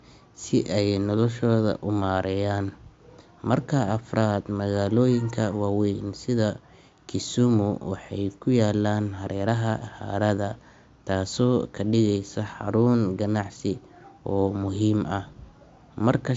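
No technical faults are audible anywhere in this speech recording.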